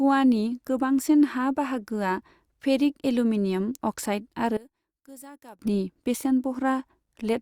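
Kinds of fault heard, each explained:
One channel inverted: at 4.57–5.59 s the speech falls about 23 dB to a faint residue, likely reversed polarity cancelling the shared centre in mono.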